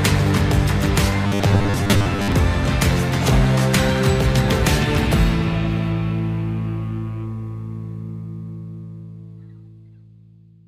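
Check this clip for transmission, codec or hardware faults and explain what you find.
One fault turns up. From 1.27 to 2.32 s the sound becomes a rigid, metallic 100 Hz buzz, robotic sound from repeated short buffers, likely from about 10 ms buffers replaying while most real audio is skipped.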